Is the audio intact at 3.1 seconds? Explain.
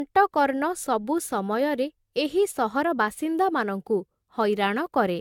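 No. Generation loss runs throughout, so 3.1 s is swirly, smeared and hollow with blurred attacks and nothing above 17 kHz, likely from around five successive AAC re-encodes.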